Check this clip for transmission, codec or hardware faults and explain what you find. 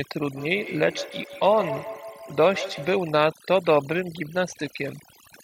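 Three faults are present in this speech clip.

Overdone noise removal runs throughout. Bands near the noise estimate are gated off, leaving a broken-up background of twinkling specks, seen as isolated spectrogram dots over black.

Feedback echo between two devices runs from 0.35 to 3.08 s. Re-captured playback returns roughly every 150 ms at up to about -12 dB, showing as repeating, fading waveform copies.

A Bluetooth SBC bit pool drop runs from 4.45 s to the end. It fits a bit pool falling from 31 to 15, with treble dulling into grit and the spectrogram's upper bands emptying.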